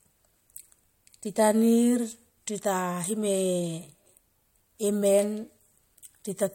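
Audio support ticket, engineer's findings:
Chunks out of order, 4.06–4.09 s in speech: brief jumbled stutter. One 10 ms chunk plays two chunks late, giving three hard joins. Buffer/queue reordering in the playback or write path. Waveform shows three step discontinuities.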